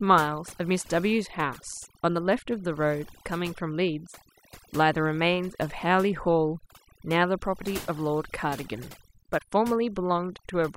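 Speech, with overdone noise removal running through the whole clip. The noise reduction was set too aggressively, so frequency bands near its noise estimate get pulled far down or muted, taking quieter voice components with them: the background drops and breaks up into twinkling specks.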